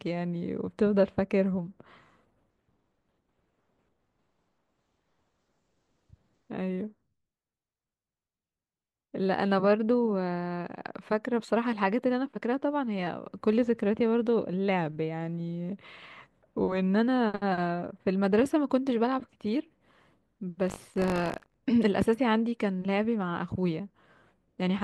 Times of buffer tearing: 20.66-21.59

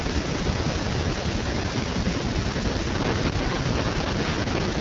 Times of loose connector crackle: 2.90-4.68

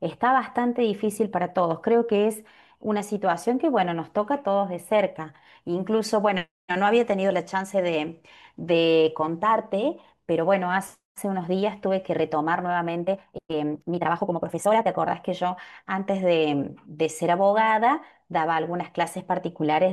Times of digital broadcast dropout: none

